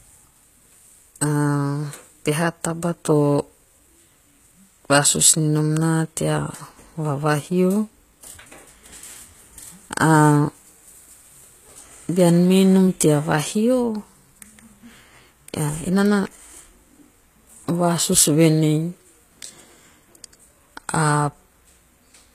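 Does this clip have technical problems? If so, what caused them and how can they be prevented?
Yes. Throughout the speech, s sounds come out gritty and lispy, and the treble stops dead near 14.9 kHz. This is HE-AAC compression, likely at a very low bitrate around 20 kbps. The upper band is rebuilt by copying lower bands, so harmonics misalign. Encoding at a higher bitrate, or with plain AAC, prevents it.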